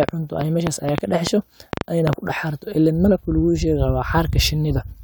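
From about 0.03 s to 2.14 s the speech carries a train of clicks, roughly ten sharp pulses arriving unevenly at an average of about 5.2 per second. Each click has much the same short, hard shape and stands well above the speech level, so it reads as an irregular ticking laid over the talker and through the gaps between syllables. The likely source is interference coupling into the signal chain or a faulty connection or power supply.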